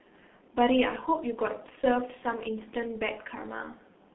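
G.723.1 codec damage runs through the whole speech clip, from start to finish. The sound is confined to a narrow telephone band of roughly 200 Hz to 3.5 kHz, which fits coding at around 6.3 kbit/s. The codec works in 30 ms frames and refreshes its model of the voice only slowly, so the speech comes across muffled and hoarse, with consonants smeared together. The damage here is heavy.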